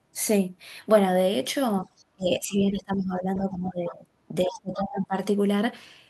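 Speech over a call path where the top end stops around 12 kHz, which fits an Opus connection, and it has two echo-canceller problems. The first is speech suppressed in double talk. The talker's level drops out at 1.82–1.95 s (by about 20 dB), again for most of 2.12–4.04 s (about 15 dB down), and at 4.45–5.14 s (about 25 dB). The likely cause is the other end talking at the same moment, so the canceller couldn't separate near speech from loudspeaker echo and turned everything down. The second is the other side's voice leaking through. Faint scraps of a second voice, about 20 dB under the talker, show up at 3.35–3.39 s, 3.87–3.95 s and 4.78–4.98 s. They fall inside those suppressed stretches and are probably far-end audio picked up from the loudspeaker that the canceller didn't fully remove.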